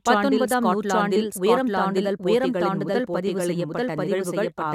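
A speech recording runs throughout with a doubled audio track: every phrase returns about a second later at much the same loudness as the first pass, so the two copies overlap and talk over each other from about one second in. The repeat is dry and full-band, with no decay or room colour, which sets it apart from an echo. The likely cause is the same signal reaching the mix twice, once through a slower path running behind.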